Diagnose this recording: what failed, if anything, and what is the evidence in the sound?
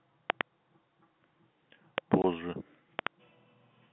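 Loud pops at 0.3–0.43 s and 2.99–3.09 s are doubles, with a single one at 1.98–2.0 s. They peak about 20 to 25 dB above the speech. The cause is likely voltage spikes in the analogue wiring.

Packet loss filled with silence cuts a 20 ms hole at 2.22–2.24 s. This fits one dropped 20 ms network packet.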